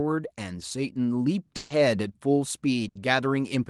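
A burst of packet loss hits this speech recording at 1.56 to 1.71 s and again at 2.88 to 2.96 s. Each time, consecutive packets went missing and the receiver concealed the gap by extending the last sound while fading it, about 140 ms the first time and 70 ms the second. The sound then resumes later, with that stretch skipped. The call path's audio band tops out near 12 kHz, consistent with Opus at around 32 kbps.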